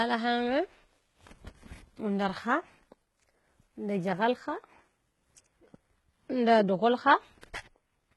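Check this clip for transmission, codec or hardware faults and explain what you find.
One codec fault runs through the whole recording.

HE-AAC compression: across the entire speech clip the s sounds come out gritty and metallic, and nothing is present above 11.8 kHz. The likely cause is HE-AAC at a very low bitrate, around 16 kbps, heavily damaged, with spectral band replication copying lower bands upward so the treble harmonics misalign.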